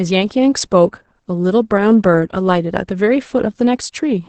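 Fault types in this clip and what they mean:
Opus voice compression: The encoder appears to run Opus in its SILK linear-prediction mode at a wideband setting, with the coarse excitation coding that fits a bitrate near 10 kbps. It models the vocal tract and spends very few bits on the signal driving it. Nothing remains above about 8.6 kHz throughout, so the speech loses its air and sibilant crispness, and the heavy coding leaves it muffled, hoarse and faintly robotic from start to finish.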